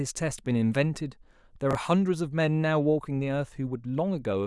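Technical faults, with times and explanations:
1.71–1.75 s, chunks out of order: in this stretch of speech, one 21.33 ms chunk of audio showed up one chunk late, so it plays after the chunk that should have followed it. Nothing is actually missing, but the two pieces are swapped, which leaves three hard joins where the waveform doesn't line up. You hear that as a tiny jumbled stutter, over in about 40 ms.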